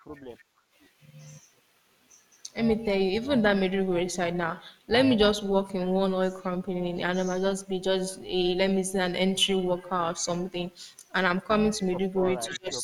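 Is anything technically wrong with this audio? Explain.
Yes. Four kinds of fault can be heard.

Overlap-add ripple runs through the whole clip. The audio was split into windowed frames and rejoined with an overlap that does not add up to a steady gain. The level therefore rises and falls once every frame. Here the level swings by about 6 dB, around 400 times a second. The speech takes on a buzzy, rough, robotic texture rather than a slow wobble.

The background is gated by the echo canceller twice near the start. This happens from 0.00 to 0.09 s and again from 0.38 to 0.76 s. While the far-end loudspeaker was active, the canceller pulled the microphone down by up to about 12 dB. The room sound briefly sinks, for roughly a tenth of a second and then roughly a third of a second. It comes back when the canceller releases.

An echo leak appears from 12.45 to 12.58 s. A faint, delayed copy of the speech is audible, trailing by 288 ms and sitting roughly 15 dB below the main voice. 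It is short. The likely cause is a loudspeaker on one end whose echo canceller let part of the played-back signal through to its microphone. That residue was then sent back down the line.

Speech suppressed in double talk starts at 12.46 s and continues to the end of the clip. The talker's voice drops sharply, by around 25 dB at its deepest, over roughly 0.4 s. It sounds pushed down. This is likely the canceller reacting to both sides talking at once. It could not separate the local voice from the echo, so it attenuated everything.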